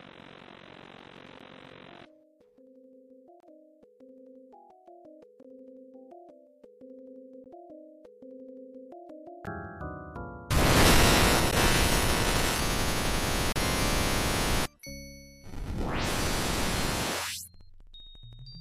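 Gaps between stream segments open at 1.40 s, 3.40–3.43 s, 5.43 s, 7.44 s, 9.46 s, 11.51 s, 13.52–13.56 s and 15.56 s, about every two seconds, which fits 2-second segments. Each segment's timestamps leave a small gap before the next, and the player fills it with silence, adding 9 to 35 ms of time without losing audio. The sound cuts off and resumes with hard edges, and the longest holes are 28 ms and 35 ms.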